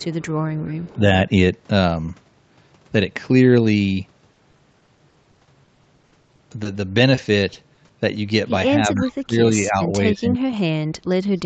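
At 0.03 to 0.27 s and again at 0.63 to 0.90 s, an echo leak is heard. The far end's echo canceller likely failed to remove its loudspeaker pickup. A faint copy of the speech returns about 0.3 s late, at about 30 and then about 25 dB below the voice.

From 0.90 to 1.00 s the speech is suppressed in double talk. With both sides active, the canceller likely mistook the talker for echo and attenuated everything. The voice dips by about 15 dB for roughly a tenth of a second.

Between 4.33 and 7.91 s, repeated packet loss gives a robotic sound. Packets went missing nearly thirty times, with gaps up to 60 ms each. Concealment stretched the previous audio over about a fifth of that span, so the speech turns choppy with pieces missing.

At 8.95 to 9.02 s the delayed echo briefly leaks back, again about 0.3 s behind and about 25 dB down. Double-talk suppression then returns from 8.95 to 9.42 s, cutting the voice by about 20 dB. 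From 9.62 to 11.43 s it is harsher, with drops of about 35 dB that leave the speech turned down for around a second and a half in total.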